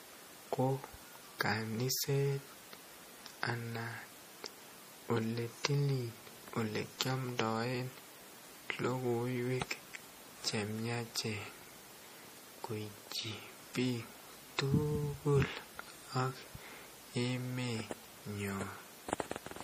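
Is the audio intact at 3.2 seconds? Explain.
No. At 3.2 seconds, as throughout the speech, the sound is watery and swirly with chirpy s sounds, likely from MP3 compression starved of bits, which fits roughly 40 kbps. Weak frequency lines are zeroed and flicker between frames. A spectrogram shows nothing above 15.2 kHz and patchy, blinking high-frequency detail.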